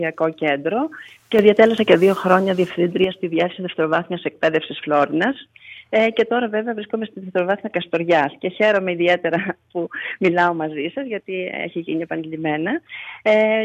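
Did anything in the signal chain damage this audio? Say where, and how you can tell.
Yes. From 1.39 s to 3.04 s there is a sudden gain jump: sound and background noise rise together by about 6 dB in a single step, then drop back just as abruptly. A digital gain stage likely applied a setting without ramping. Automatic gain control would glide instead, and a louder source wouldn't lift the noise floor.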